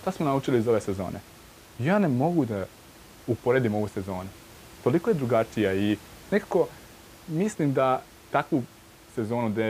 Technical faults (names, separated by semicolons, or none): none